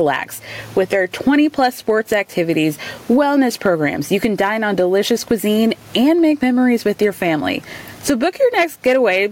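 Input gain set far too high for the microphone, with a fast limiter or compressor hauling it back on every loud syllable, is the likely cause of the gain pumping heard throughout. The level swings by around 20 dB, and the room noise sits about 42 dB below the speech, leaving loud and soft passages squashed close together.

At 3.21 s a peak exceeds what a stage in the chain can pass and is cut flat, a single short burst of hard clipping right at the overload point. The flattened top adds high harmonics, heard as a brief crackle on that peak.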